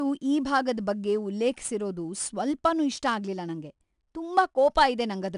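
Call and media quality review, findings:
4-bit ADPCM compression throughout the speech. Each sample is coded as a coarse adaptive step from a prediction, so error noise tracks level. Plainly audible gritty hiss on loud syllables, roughened attacks. Nothing above 10.6 kHz fits roughly 22 kHz sampling, about 89 kbps.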